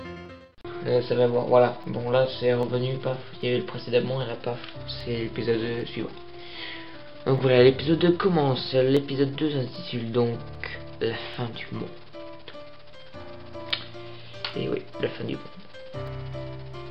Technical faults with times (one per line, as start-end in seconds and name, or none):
0.26-16.86 clock drift buffer slips